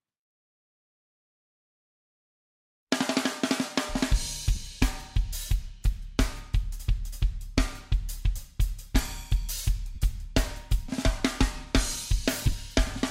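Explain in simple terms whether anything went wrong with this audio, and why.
Lost LE Audio frames at 4.55 s, 9.95 to 9.98 s, and 12.45 to 12.53 s: bits of the wireless Bluetooth signal never arrived. The receiver filled each gap by replaying the last sound with its detail scrambled, so tones briefly become a fuzzy smear. The final gap is several very short dropouts spread across about 75 ms.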